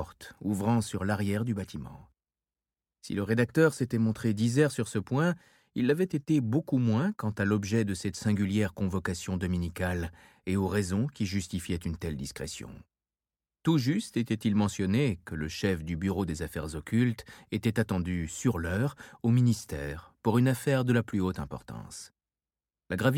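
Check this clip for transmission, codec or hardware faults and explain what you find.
No transmission, codec or hardware faults turn up in this clip.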